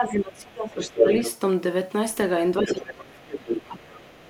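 From 0.0 to 1.21 s, the echo canceller likely mistook both sides talking at once for its own echo and turned everything down. This is speech suppressed in double talk: the talker dips by roughly 25 dB. In and around that stretch, the canceller likely left loudspeaker sound in the microphone signal, so the other side's voice leaks through. It is faint at 0.05 to 0.15 s, then from 0.8 to 1.33 s it is about 5 dB louder than the talker. From 2.6 s to the end, the same suppression pulls the talker down again by about 25 dB. The leaking voice returns at 2.64 to 2.82 s, about 5 dB below the speech, and briefly at 3.34 to 3.38 s, about 10 dB below.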